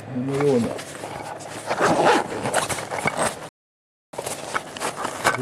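At 3.49 s the sound halts in mid-flow and stays silent for about 0.64 s, until 4.13 s. This is a playback stall, likely the player running out of buffered data or its output thread being blocked. Unlike a brief dropout, the silence is long and clean.

From 4.13 s to the end there is time-compressed catch-up. The player clears its backlog by cutting and cross-fading small pieces, so the audio runs about 1.15 times fast. Its pitch stays normal, which rules out a simple speed-up.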